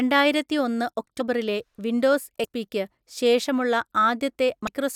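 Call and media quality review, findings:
Compressed frames skipped at 1.19 s, 2.43–2.45 s and 4.67 s in the speech. Each jumps ahead about a tenth of a second. Decoder dropping missing or rejected frames.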